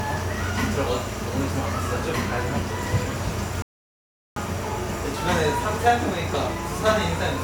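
A playback stall runs from 3.62 s to 4.36 s, cutting the sound off abruptly mid-flow and leaving about 0.74 s of dead silence before the audio picks up again. The gap is too long and too clean to be a dropout within the recording itself. The likely cause is the player running short of buffered data, or its output thread being blocked, so nothing reached the output until it recovered.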